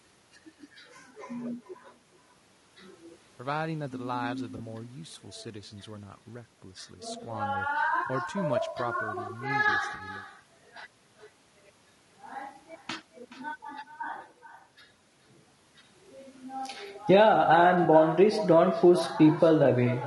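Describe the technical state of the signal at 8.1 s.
At 8.1 s the sound briefly smears into a noisy, phasey patch from 8.07 to 8.10 s. This is AAC frame loss with concealment. A stretch of about 20 ms of coded audio never arrived, which fits a single lost frame. The decoder rebuilt the gap from the last good spectrum, reusing its energy with scrambled phase. The loss was short enough that the sound carries straight on rather than fading to silence.

Around that same moment every syllable is trailed by a fainter, thinner copy arriving roughly 0.4 s later, at about 15 dB below the speech. This is echo with no canceller. The far end's loudspeaker output is being picked up by its microphone and sent back across the network, and nothing at that end strips it out, so the talker's own speech returns after the round trip.

The speech itself sounds rough and grainy, with a hiss filling the spaces between harmonics and an upper band that sounds flattened and artificial. 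This points to low-delay AAC compression, likely AAC-ELD at a rate around 32 kbps. Its short frames resolve pitch harmonics coarsely, and at that bitrate there are too few bits left to keep the gaps clean or code the top band faithfully.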